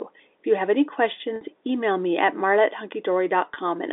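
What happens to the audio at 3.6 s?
Just before 3.6 s, from 3.54 to 3.56 s, the speech briefly catches and holds with a slight buzz. The effect is packet loss with pitch repetition. About 20 ms of audio went missing, which fits two 10 ms packets, and the receiver filled the hole by replaying the last pitch period instead of leaving silence. Because the gap is so short, the repeated cycle does not fade into silence, and the speech picks up again almost at once. The surrounding G.711 telephone band is audible as a narrow line-limited sound.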